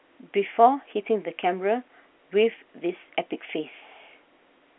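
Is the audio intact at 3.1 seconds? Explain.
Yes, at 3.1 seconds the speech is intact, carried through G.711 telephone coding that confines it to the narrow phone band of roughly 250 Hz to 3.4 kHz, with at most a faint trace of codec damage.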